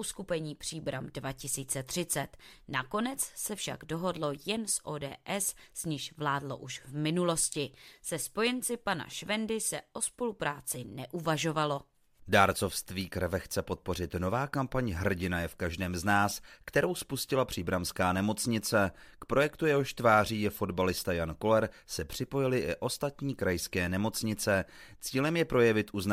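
Listening through this speech recording, nothing technically stood out at any point.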